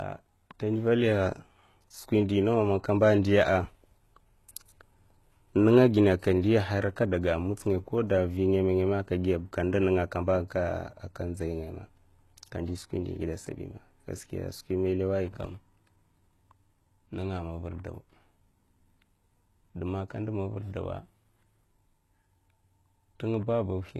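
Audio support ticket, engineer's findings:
Speech band empty above 12.3 kHz for the whole clip, with artefacts of the first low-bitrate encode still present throughout. Pattern fits low-bitrate audio saved at a high bitrate: likely an earlier low-rate encode, then MP3 at a high rate. Re-encode cannot restore removed content.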